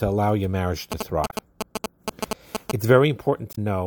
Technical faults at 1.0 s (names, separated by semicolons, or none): GSM signalling bursts